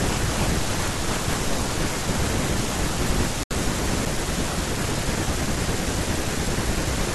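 A speech clip in which the sound drops abruptly to silence at 3.43 s and stays out for about 73 ms, returning at 3.51 s as if nothing had happened. That brief dead gap is a Bluetooth stall: the likely cause is radio interference delaying packets to the headphones long enough for their playback buffer to empty, so output halted until the resent packets arrived and refilled it.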